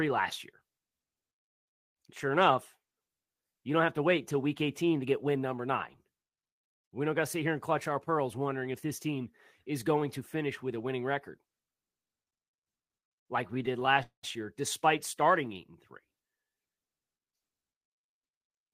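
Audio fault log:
12.11 to 13.97 s, repeated stalls (stutter): the speech keeps catching and dragging here. There are about twenty short hitches across that span, the longest around 65 ms. Packets were turning up late, so the jitter buffer kept running dry and the receiver padded each hole by carrying the last sound on. Roughly a quarter second gets filled in all told, around 14% of the stretch, but nothing actually goes missing. It's just stretched and choppy.
14.03 to 14.25 s, call audio freeze: right after that, the sound hangs for about 200 ms. The last bit of audio is held over briefly and fades, then there's around 120 ms of silence before things pick up exactly where they left off, so nothing is lost, only delayed. The likely cause is packets being held up in transit long enough to empty the buffer, which left the playout running about 200 ms later afterwards.
15.42 to 16.62 s, jitter buffer slow-down: over this stretch the speech runs slower, at about 92% of normal pace, while the pitch stays where it was. 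Sounds come out a bit drawn-out, maybe with a faint wobble. The buffer was rebuilding its reserve by repeating tiny slices of the waveform, single pitch cycles and bits of pause, and that added roughly 106 ms in total.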